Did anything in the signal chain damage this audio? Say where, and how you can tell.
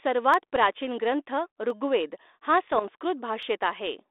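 Yes. Dropped samples, likely a driver or buffer slip: single sharp clicks at 0.34, 1.70 and 3.43 s, where a sliver of waveform far under a millisecond vanishes.

Bit errors on the ADPCM link: a pop at 0.56 s and rough, level-wobbling bursts from 2.63 to 2.86 s, as flipped bits knock the decoder's predictor and step size.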